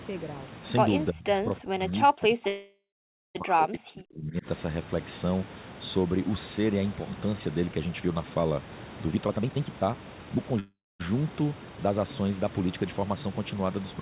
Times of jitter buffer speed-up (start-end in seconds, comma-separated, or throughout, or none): 9.10-10.59